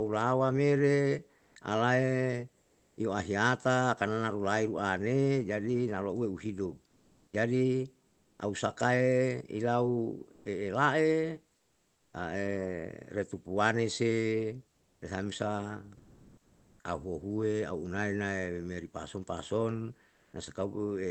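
Between 1.37 and 2.97 s, 10.33 and 12.13 s, 14.71 and 16.83 s, and 20.09 and 20.33 s, comfort noise sits in place of the background. The sender likely stopped transmitting during pauses under discontinuous transmission, and the receiver filled the gaps with synthetic noise. For roughly 540 ms, 700 ms, 1.16 s and 240 ms respectively, the real room tone becomes a flat, featureless hiss. In the last stretch, where the background sits about 43 dB below the loudest speech, the fill shifts the level by only about 1 dB.

From 6.87 to 8.39 s the speech is chopped by the voice detector. The detector likely toggled transmission on and off repeatedly, so about 780 ms of quiet syllables and word edges were swapped for fill.

From 14.98 to 15.01 s, inside the third comfort-noise stretch, the onset is clipped by the voice detector. The detector likely reacted late, dropping about 30 ms, so the returning speech starts abruptly without its soft attack.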